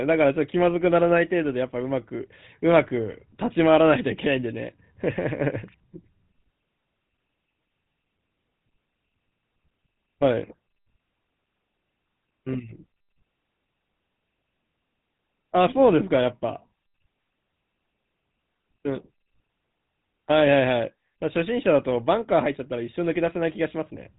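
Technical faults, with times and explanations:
Throughout, GSM full-rate codec: coarse pulse-driven vocal-tract modelling makes the speech plainly buzzy and gravelly; the spectrogram shows a flat ceiling, with nothing above 3.8 kHz.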